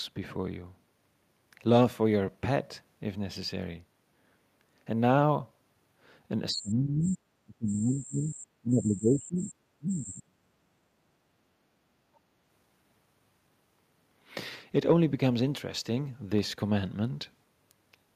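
A speech recording in which the talker is repeatedly pushed down by speech suppressed in double talk. At 6.52–7.24 s, 7.44–8.38 s, 8.61–9.54 s and 9.78–11.27 s the voice sinks by roughly 25 dB, and by about 35 dB in the last and longest stretch. The likely cause is an echo canceller that could not tell the near talker from loudspeaker echo while both sides spoke and attenuated everything. On a waveform these show as four collapsed sections separated by brief recoveries. A spectrogram shows harmonics and upper bands fading out across those spans. Shortly afterwards, at 12.15–12.19 s, a brief scrap of the other side's voice leaking through appears, around 40 dB below the talker. It was likely residual loudspeaker pickup that the canceller failed to remove. It is only a faint, short smear on the spectrogram and barely a ripple in the waveform.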